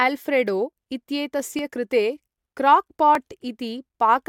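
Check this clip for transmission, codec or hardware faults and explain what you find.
A repeated buffer fault occurs twice in this speech, at 1.59 s and 3.15 s. Each time, fresh audio arrived late, so one piece about 2.67 ms long, which fits a 128-sample buffer, played an extra time. Nothing is skipped. Each event sounds like a tiny click. On the waveform a short segment repeats with a hard seam, and on the spectrogram a thin vertical broadband line appears.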